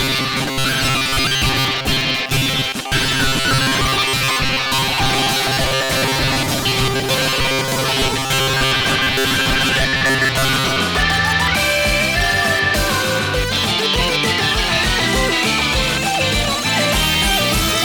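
From 0.01 to 10.79 s the sound becomes a rigid, metallic buzz locked at about 133 Hz, tracking the original only loosely. This is robotic sound from repeated short buffers, likely caused by audio arriving too seldom, so a roughly 7.5 ms slice repeats and most real audio is skipped.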